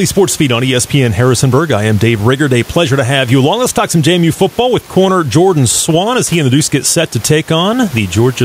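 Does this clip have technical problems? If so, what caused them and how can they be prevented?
Yes. Gain pumping runs through the whole speech clip: the gain ducks by roughly 5 dB under every loud syllable, with the room noise about 29 dB below the speech. Unlike a noise gate, the background never cuts to silence. The likely cause is input gain set far too high, with a fast limiter pulling it down on each peak. To prevent it, lower the microphone gain so peaks stay clear of the limiter.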